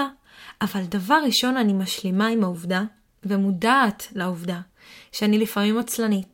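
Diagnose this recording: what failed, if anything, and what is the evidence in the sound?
Nothing failed here; listening through the speech, no stage in the chain leaves any trace worth chasing, so there's nothing to diagnose.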